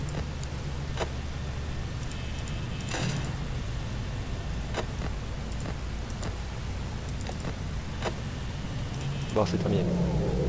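Nothing stood out on listening, and the audio carries no content above about 8 kHz, consistent with a wideband call codec such as G.722.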